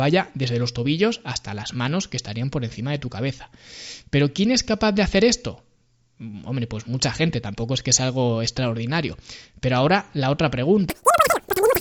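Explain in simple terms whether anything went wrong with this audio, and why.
Yes, near the end. From 10.9 s to 11.8 s there is a wrong sample rate fault. The voice suddenly runs three times too fast and jumps about 19 semitones higher, like a chipmunk.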